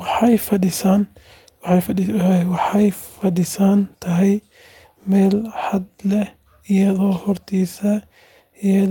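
Listening through the speech recording, nothing stood out as a technical problem at any point.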